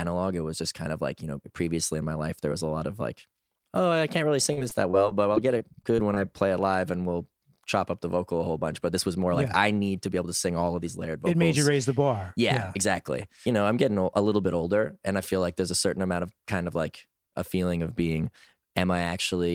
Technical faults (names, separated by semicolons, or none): repeated packet loss (robotic sound)